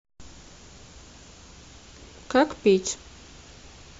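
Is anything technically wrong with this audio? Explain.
No, nothing technically wrong shows up anywhere in this speech recording.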